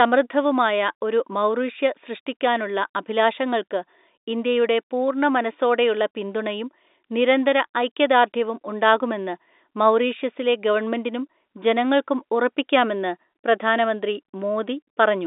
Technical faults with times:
none

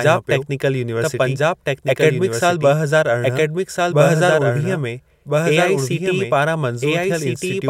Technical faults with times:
0.00-7.70 doubled audio track

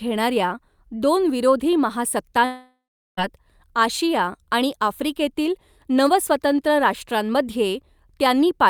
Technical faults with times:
2.45-3.19 long network dropout

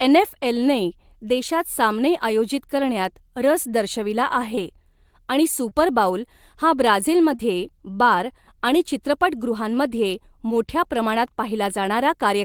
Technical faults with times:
4.55-4.59 short concealed packet loss
5.69-5.73 short concealed packet loss
7.35-7.41 short concealed packet loss

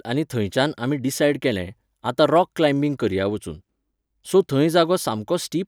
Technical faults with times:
none

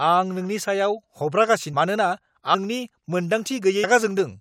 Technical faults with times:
2.53 compressed frames skipped

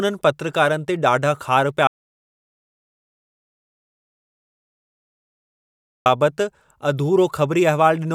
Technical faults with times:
1.87-6.06 audio dropout to silence

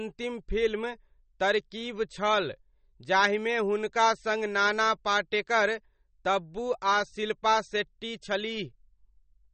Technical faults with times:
0.00-9.54 MP3 compression

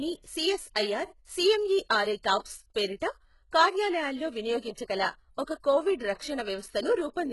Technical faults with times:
0.00-7.32 HE-AAC compression
4.74-4.77 pre-echo

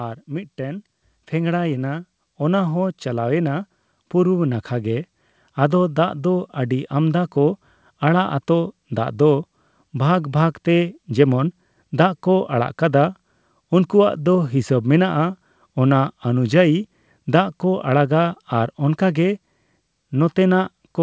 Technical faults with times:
1.02 microphone volume stepped up

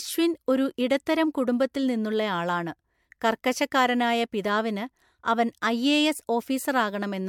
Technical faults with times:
0.00-7.29 generation loss

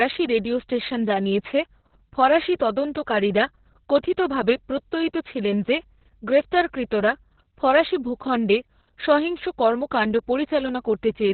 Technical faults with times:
0.00-11.33 Opus voice compression

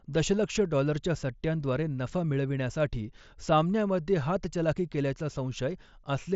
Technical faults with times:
none

